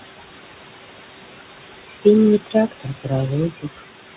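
Speech over a call line with nothing above 4 kHz, which fits a narrowband G.711-style codec, and with room noise about 7 dB below the voice. Noise suppressor artifacts run throughout: the background is pulled down about 19 dB between phrases and rises under the speech. Speech cut by the noise suppressor occurs at 1.84–2.06 s, 2.4–2.55 s, 2.71–3.12 s and 3.5–3.8 s, where the suppressor mistook parts of the voice for noise and dropped them about 19 to 21 dB, so sounds within those spans come through swallowed and faint.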